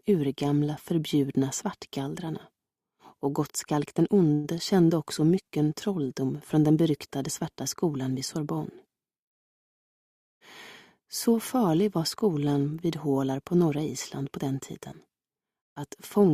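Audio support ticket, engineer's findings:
Call audio freeze, 4.33 to 4.47 s: last sound smeared into a brief fading buzz for 108 ms, then playback resumes right where it left off, nothing dropped. Likely late packets starving the jitter buffer; leaves 108 ms extra delay.

Jitter buffer speed-up, 10.99 to 11.34 s: sound runs at 108% speed, pitch unchanged, a bit hurried. Receiver snipping out pitch-period-sized chunks back to back, roughly 40 ms total, to shed surplus buffered audio and cut latency.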